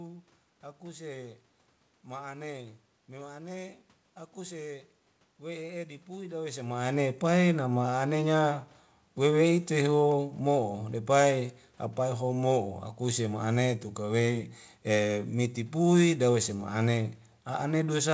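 No technical faults can be heard in the recording. The audio has passed through a call codec and contains nothing above 8 kHz, which fits G.722 at 64 kbps.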